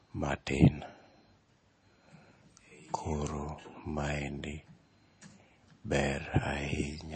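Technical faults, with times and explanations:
Throughout, MP3 compression: Nothing is heard above 8.3 kHz, so the speech sounds dull and the s sounds lose their edge. The codec damage is plainly audible across the whole clip. Quiet parts of the spectrum drop in and out from frame to frame, giving a watery, swirling texture. The likely cause is MP3 encoding at a low bitrate, about 32 kbps. The encoder ran short of bits, cut the treble and discarded weak detail.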